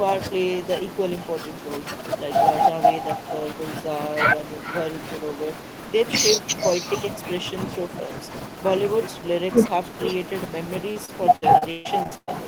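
A speech recording that carries echo with no canceller for its whole length: each phrase returns roughly 0.4 s later as a fainter copy, about 11 dB below the direct speech, and thinner. That delay and coloration fit the far end playing the call through a loudspeaker while its microphone picks it back up, with no echo cancellation removing it before it travels back over the network. From 10.91 s to 12.29 s there is repeated packet loss with a robotic sound. Eight separate gaps open in quick succession, the longest about 135 ms. Together they remove about 460 ms of audio, roughly a third of that stretch. The receiver covers each hole by stretching the last decoded sound. This produces choppy fragments with pieces of speech missing, and a new dropout follows soon after the last one.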